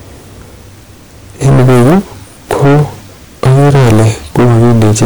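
From 1.43 to 1.99 s, 2.51 to 2.82 s, and 3.43 s to the end, the speech is hard clipped. It is driven about 20 dB, about 18 dB, and about 20 dB past what the stage can pass, so every peak is sliced flat. The result is a harsh, buzzy fuzz on all the louder sounds. On the waveform the tops sit as flat plateaus. On a spectrogram, dense harmonic energy smears upward well into the high kHz range.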